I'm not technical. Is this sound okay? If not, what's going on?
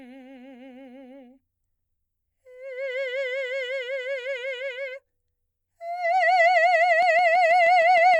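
No. A train of clicks runs from 7.03 to 8.15 s: about seven sharp ticks, evenly spaced at roughly six per second, sitting on top of the music. They most likely come from electrical interference from nearby equipment or a faulty connection or power supply.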